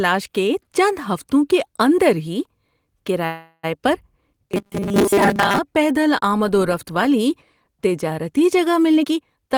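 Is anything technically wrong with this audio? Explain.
Yes. The speech has three faults.

From 3.25 to 3.79 s there is a call audio freeze. The last sound carries on as a fading buzz or hiss, then briefly drops out. Delayed packets likely emptied the jitter buffer. About 380 ms of filler was inserted. The speech then resumes where it stopped, with nothing lost but a later delay.

From 4.52 to 5.59 s there is robotic sound from repeated short buffers, ending just before "پیدل آمد و رفت". The speech turns into a rigid, metallic 200 Hz buzz. New audio likely arrived too seldom, so a 5 ms piece was repeated over most of the stretch.

From 8.92 to 9.55 s, just after "رفت والی تجارتی جگہ", there is a jitter buffer speed-up. The speech runs at 138% speed with unchanged pitch and sounds hurried. The receiver cut many short pitch-period pieces, roughly a third of a second in total, to drain excess buffered audio.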